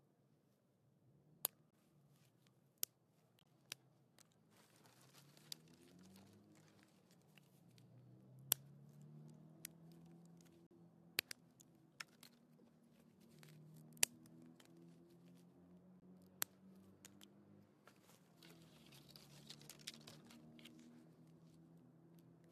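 Corrupt frame muted: damaged compressed frames were rejected by the decoder and replaced with silence, leaving abrupt holes in the sound at 1.71–1.74, 3.39–3.47, 10.67–10.72 and 16.00–16.03 s, with the timing intact.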